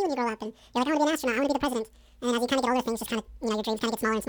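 Throughout, the speech is read two samples at a time, so it plays at 2.0x speed, an octave higher; the spectrogram shows harmonics spaced twice as widely.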